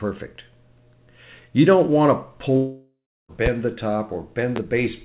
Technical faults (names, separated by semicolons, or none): long network dropout; loud pop